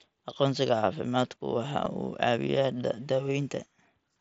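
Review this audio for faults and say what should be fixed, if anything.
Concealed Bluetooth headset packet loss at 1.85 s: about 7.5 ms went missing, consistent with one dropped packet, and the receiver patched it with a closely matching slice of the preceding waveform, so it is barely audible under the mSBC wideband codec. To prevent it, keep the headset close to the phone and away from Wi-Fi and other 2.4 GHz interference.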